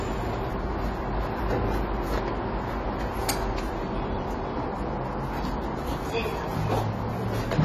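Dull, smeared audio throughout, with a warbling, fizzy texture and nothing above 13.5 kHz, likely from AAC compression at a low bitrate, around 32 kbps.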